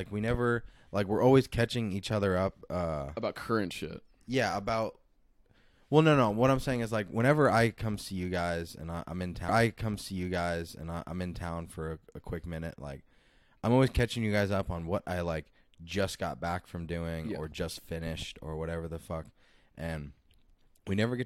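At 9.48 s the player fetched or queued the same stream segment twice, so the stream segment is repeated: after reaching 11.47 s, playback jumps back and runs through that stretch of speech a second time, adding about 2.0 s to the programme. The jump back lands with a small blip, and the listener then hears those same two seconds of speech again before the clip continues forward.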